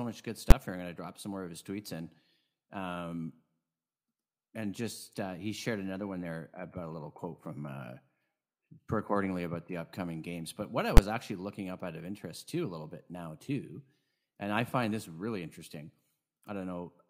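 Invalid numbers at full scale strike at 0.51 s and again at 10.97 s in this speech. A calculation yielded infinite or invalid values that were pinned to the maximum level for one block of about 11.6 ms, which fits a 512-sample block. Each event is heard as a single loud bang.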